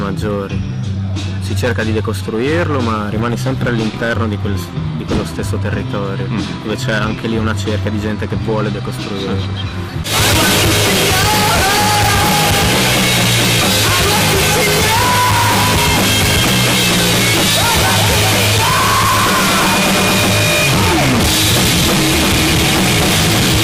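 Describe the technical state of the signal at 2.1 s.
At 2.1 s the signal is carrying MP2 compression damage that runs through the whole clip, likely from an MPEG Layer II encoder starved of bits, at a rate that fits roughly 80 kbps. With too few bits to share among its 32 sub-bands, the encoder drops upper bands and quantises the rest coarsely. The sound is plainly dull, with a gurgling, granular grit as bands flicker in and out.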